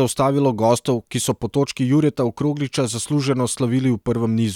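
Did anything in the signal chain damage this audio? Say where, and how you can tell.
No, nothing in the signal chain damaged this audio.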